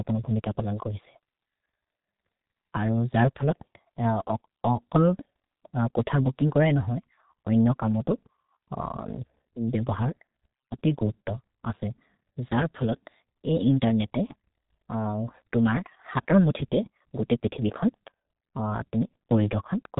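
From start to end the speech carries heavy G.723.1 codec damage: nothing above 3.8 kHz survives, and the 30 ms frames leave a hoarse voice with smeared consonants, which fits a rate near 6 kbit/s. Simple band-limiting would muffle without this roughness.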